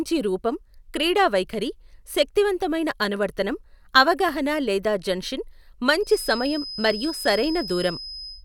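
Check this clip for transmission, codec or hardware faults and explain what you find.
One fault is present, a feedback whistle near the end of the speech. From 5.98 s, right after "అనువర్తనం అవగాహన లేదా జన్షిన్", a thin, steady tone at 5.1 kHz sits about 15 dB under the speech to the end, swelling and fading slowly in level. Likely cause: a loudspeaker-to-microphone loop hovering at the edge of feedback, sustaining one frequency without running away.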